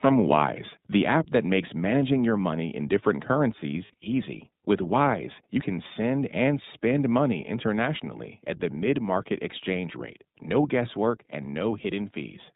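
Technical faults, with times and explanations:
Throughout, iLBC codec. The speech is carried at 15.2 kbps in 20 ms frames, each coded on its own. Nothing above 4 kHz survives, so the sound is narrow and muffled. The coding damage is plainly audible as a rough, slightly synthetic texture.
1.12 to 1.15 s, microphone overload. The loudest peaks exceed the converter's limit by about 1 dB, and their tops are flattened. Only a small share of samples is cut. This is likely input gain set too high, giving a brief harsh crackle.
2.04, 7.47 and 11.1 s, microphone volume stepped down. The whole level drops suddenly, by about 1 dB at the first two points and about 2 dB at the last. The speech and the background fall together, which points to the call software lowering the input gain in steps.
3.86 to 4.08 s, lost iLBC frames. About 100 ms of audio is missing, spread in short gaps over 200 ms, the longest around 40 ms. 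The decoder fills each gap by repeating the last pitch cycle with noise, giving a brief buzzy hold. Because each frame stands alone, the sound recovers almost at once.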